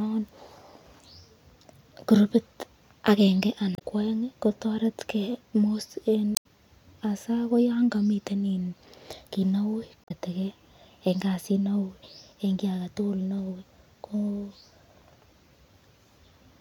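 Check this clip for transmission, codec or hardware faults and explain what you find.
Three brief glitches interrupt the speech. Damaged data in a compressed stream at 3.72–3.82, 6.34–6.46 and 10.02–10.11 s: corrupted frames make the decoder lose sync and hunt for the next header, producing a chirp, squawk, click or short hole.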